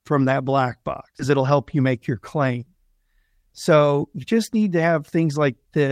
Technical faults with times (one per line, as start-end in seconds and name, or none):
1.19-1.21 skip ahead
1.29-2.11 jitter buffer speed-up